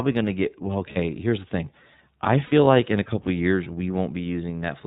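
Across the whole speech clip the iLBC codec leaves plainly audible damage. Nothing above 4 kHz survives, and the voice has a rough, slightly synthetic edge, which points to the 13.33 kbps mode with 30 ms frames. Unlike wideband codec smearing, the top end is simply absent.

At 0.93 to 0.97 s, lost iLBC frames leave about 30 ms, fitting one missing frame, filled by a repeated pitch cycle mixed with noise that sounds like a held, faintly buzzy vowel. A longer 60 ms gap at 2.45 to 2.53 s, fitting two frames, fades slightly. Unlike a dropout, there is no silence, and the voice recovers almost at once.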